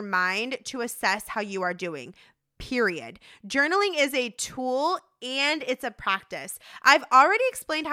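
No technical faults can be heard in this speech recording.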